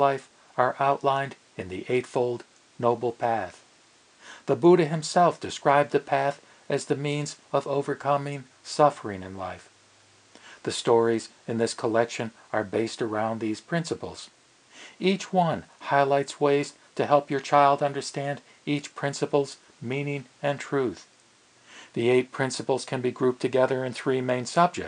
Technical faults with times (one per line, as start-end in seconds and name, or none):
none